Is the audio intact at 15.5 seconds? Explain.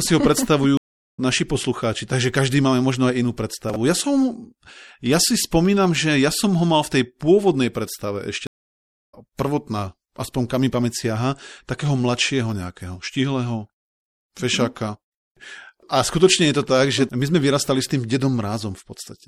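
No. At 15.5 s, as across the whole speech clip, MP3 compression damage is plainly audible: a watery, swirly texture with chirpy, metallic s sounds and smeared onsets. It is likely caused by an encoder short of bits, consistent with about 64 kbps, which cuts the treble at a fixed frequency and drops weak frequency lines frame by frame. A spectrogram would show a flat ceiling on the high frequencies and flickering holes below it.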